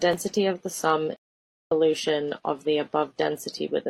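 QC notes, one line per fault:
1.16–1.72 s, stream reconnect: right after "of the sum" the speech drops into about half a second of dead silence, then picks up again somewhere around 0.7 s further on, so a chunk of the talk is simply gone. That's the connection dropping and the player restarting its decoder partway through the live stream. It rejoins at wherever the stream has got to, not where it left off, which is why it sounds like an abrupt jump.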